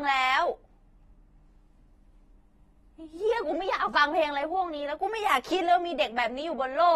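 Speech with plainly audible AAC compression damage throughout: dull, smeared, warbling. A spectrogram shows nothing above 12.4 kHz, likely from low-bitrate AAC-LC near 32 kbps.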